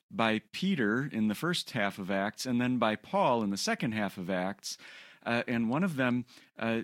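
A recording of speech, with no technical fault audible anywhere in it. There is nothing to point to by time, and no cause to give.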